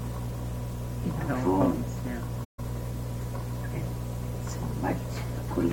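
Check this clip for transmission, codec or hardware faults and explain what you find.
One fault is audible, a brief dropout in the middle of the clip.

From 2.44 to 2.60 s the sound fades out, stays silent for about 0.15 s, then fades back in. The edges are soft rather than abrupt. This is AAC frame loss with muting. Compressed frames went missing and the decoder zeroed their spectral content. Because AAC reconstructs audio from overlapping windows, the surviving neighbours taper into and out of the gap. The length fits roughly seven lost AAC frames.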